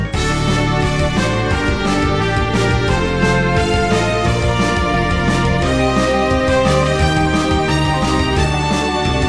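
No audible technical fault anywhere in the clip: no dropouts, clicks, distortion or level problems to report.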